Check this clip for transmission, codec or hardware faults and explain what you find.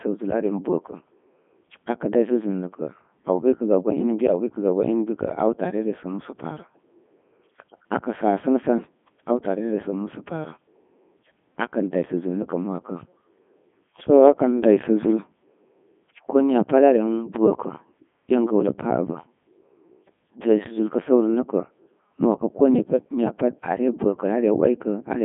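There's one fault, and it runs through the whole clip: the speech has been through a Codec 2 vocoder, with heavy damage. The decoder rebuilds the speech from pitch, voicing and envelope with sine waves, so it comes out robotic and buzzy, squeezed into roughly 150 Hz to 3.5 kHz with nothing above 3.6 kHz, which fits the 3.2 kbit/s mode.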